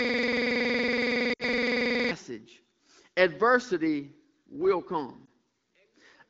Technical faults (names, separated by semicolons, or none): system hang loop; lost AMR speech frames